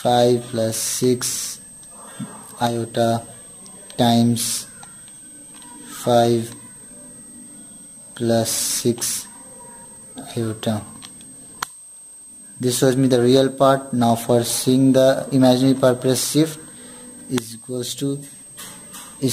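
A switching power supply is running in an audible burst mode or beating against another supply for the whole clip. It leaves a high whistle between 8.28 and 8.37 kHz, roughly 25 dB below the signal, sitting continuously under the audio.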